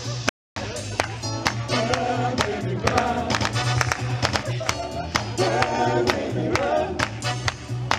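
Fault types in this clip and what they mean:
Bluetooth stall: The audio drops to silence from 0.29 to 0.57 s, a gap of about 270 ms, then resumes. This is likely a wireless link whose packets were held up by interference, so the headphone buffer emptied and playback paused until retransmitted data arrived.
Doubled audio track: From 2.87 to 4.43 s a second full-band copy of the sound runs roughly 100 ms behind the first at about equal level, with no decay or room colour, starting and stopping abruptly. Likely a second, slower capture path or an out-of-step edit.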